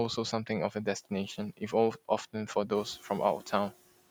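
Noise suppressor artifacts run through the whole speech clip. The suppressor pulls steady background down by about 15 dB in pauses and lets it back up under the speech, so the leftover noise breathes. A simple gate would instead switch cleanly between open and shut.

The room noise grows by about 10 dB at around two and a half seconds, ending up about 19 dB below the speech. From 2.97 to 3.10 s comes speech cut by the noise suppressor: roughly a tenth of a second of speech dips by up to about 8 dB, as though treated as noise, and sounds swallowed into the background. This partial fade differs from a dropout, which would leave complete silence.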